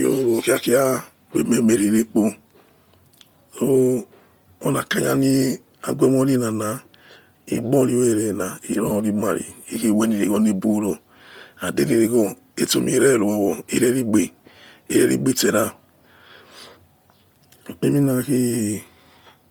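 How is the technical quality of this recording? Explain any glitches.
The recording is compromised by heavy codec damage from start to finish. The speech has a breathy, grainy edge throughout, and the upper range sounds hissy rather than detailed. The likely cause is Bluetooth LC3 compression, the transform codec of LE Audio. At a low bitrate it discards much of the high-frequency content and fills the gaps with synthetic noise. The sound points to about 32 kbps with 10 ms frames. The band still reaches about 20.2 kHz, so the graininess comes from coding, not band-limiting.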